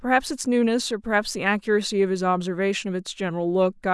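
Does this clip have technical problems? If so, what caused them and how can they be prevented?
No, no technical problems can be heard in this speech clip. With nothing at fault, there is nothing that needs preventing.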